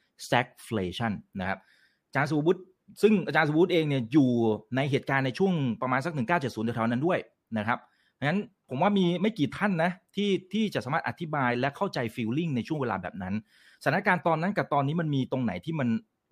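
No technical faults can be heard anywhere in the recording. There is no event to place in time or describe.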